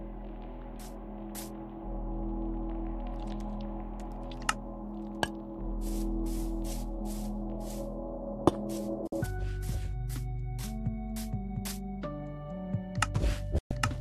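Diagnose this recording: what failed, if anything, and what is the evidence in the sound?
The failure is at the receiving end of a digital broadcast chain: a classic digital broadcast dropout, showing up twice. At 9.07 s the audio snaps to silence with a very fast fade of about 3 ms and stays gone for 48 ms before picking up at 9.13 s. At 13.58 s the same thing happens for 120 ms, back at 13.71 s. The receiver hit frames it couldn't decode and muted until clean ones arrived. The hole sizes fit whole frames of about 24 ms, two then five, and whatever was sent in those gaps is simply lost.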